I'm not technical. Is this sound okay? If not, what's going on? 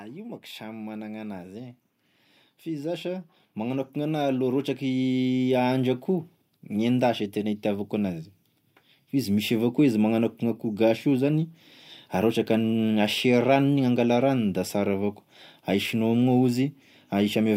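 No. Twice the whole recording swells up in loudness, the talking and the background together: gently from 0.57 to 1.82 seconds, then much more strongly from 2.63 to 6.01 seconds. This is automatic gain rising. The recording device judged the sound too quiet and turned its own volume up step by step instead of all at once, so you hear a slow climb rather than a jump, and the background climbs along with the speech.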